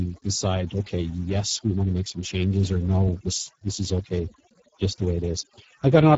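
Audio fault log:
Throughout: overdone noise removal. The suppressor is pushed so hard that any frequency band sitting near its noise estimate is driven down or shut off entirely. The quieter parts of the speech fall below that threshold and are removed along with the noise. Pauses collapse to near silence, dotted with brief twinkling specks where isolated bands flicker back on.
Throughout: Speex codec. The damage is plainly audible. The speech carries the noisy, hoarse texture of a CELP coder that has too few bits to describe the excitation signal, which fits a low-quality setting of roughly 10 kbps. The upper band is not real signal but a shaped, noise-like fill. Nothing is present above 7.7 kHz, which marks the codec's wideband ceiling.
1.36–4.20 s: periodic clock jitter. Starting just after "decide okay" and ending just before "just the way", the converter clock is wobbling at around 1 kHz. 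Every component of the sound picks up sidebands spaced about 1 kHz above and below it, and higher components take the stronger sidebands. The result is a rough, metallic edge laid over the speech that drops out during silent moments, since with no signal there is nothing to modulate.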